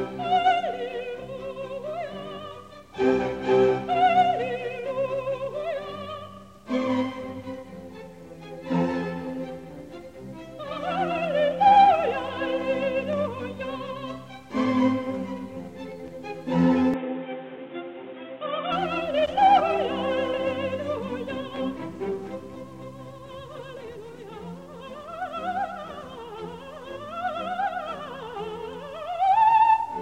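From 16.94 to 18.72 s the sound turns dull, with nothing above 3.8 kHz and a new noise floor; an input likely switched to a poorer device, unlike plain filtering.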